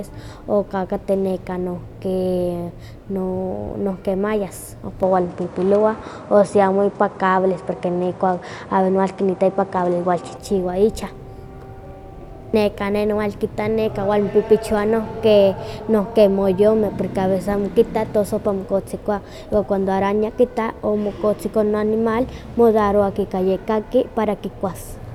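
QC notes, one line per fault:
5.03–10.37 s input switched to a poorer device: spectrogram blank above 10.5 kHz, waveform level shifts about 5 dB, faint new noise floor; likely a microphone change.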